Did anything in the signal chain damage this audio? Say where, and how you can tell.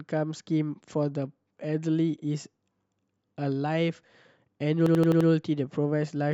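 Yes, a system hang loop at the driver or buffer stage. From 4.86 to 5.29 s, one 85 ms slice of the speech repeats exactly, five times over. The repeats come at about 11.7 Hz, so they sound like a machine-gun stutter rather than a buzz. The driver stalled while the audio hardware kept replaying the same ring buffer. The loop length fits a 4096-sample buffer. Little or no audio seems to be missing around the stutter.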